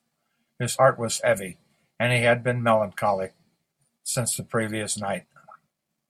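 Nothing goes wrong anywhere in this bit of speech, so there's no technical fault to point to.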